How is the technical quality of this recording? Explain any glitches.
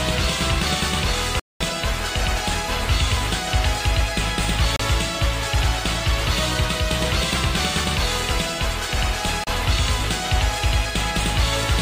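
The recording has three brief dropouts. Bluetooth stall at 1.40–1.62 s, 4.76–4.80 s and 9.44–9.48 s: the sound cuts to silence for 210 ms, then about 30 ms twice, and resumes. The likely cause is a wireless receiver's buffer running dry while delayed packets were resent.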